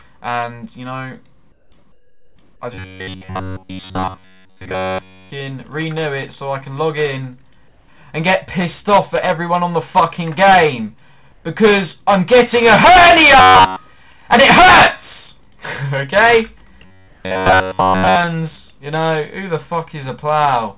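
From 1.52 to 1.72 s and 1.92 to 2.36 s, comfort noise replaces the background. It is a flat, featureless hiss, about 6 to 7 dB quieter, likely from discontinuous transmission. From 2.75 to 5.31 s, a robotic sound from repeated short buffers appears, likely from late packets. Repeats of about 10.7 ms impose a rigid 93.8 Hz metallic buzz. Comfort noise returns at 7.68 to 7.88 s and at 11.32 to 11.44 s. The robotic buzz recurs at 13.39 to 13.76 s and 16.85 to 18.17 s. The last comfort-noise patch, at 17.08 to 17.24 s, falls inside it. The call path cuts everything above 4 kHz.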